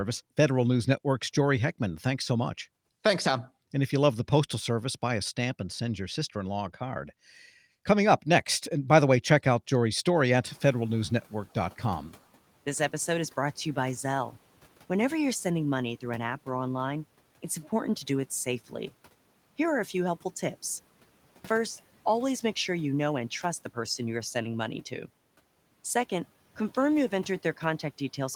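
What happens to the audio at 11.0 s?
At 11.0 s the audio is inside a noise suppressor catching up, running from 10.46 to 12.18 s. The room noise jumps by about 22 dB at around 10.5 s, and the suppressor's noise estimate still reflects the quieter background, so the louder noise passes through with less reduction at first. Over roughly 1.7 s the estimate adapts and the noise sinks by about 8 dB from its level after the rise of about 27 dB below the speech.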